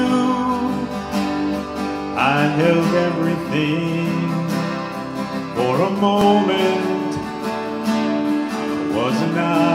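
Two brief stutters break the audio, at 2.21 s and 6.21 s. Each is a tiny click where about 6.5 ms of sound plays twice. This is overlapping chunks. The audio was handled in blocks of 4.0 s, and each new block began slightly before the previous one finished. The overlapping sliver is repeated at the seam. The two glitches sit exactly 4 s apart, matching that block length.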